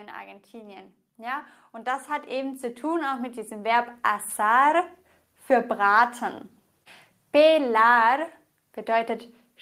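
From 0.51 s to 5.56 s the level climbs steadily by about 14 dB: automatic gain rising. The gain control judged the input too quiet and kept turning it up, so the speech and the background noise swell together over those five seconds.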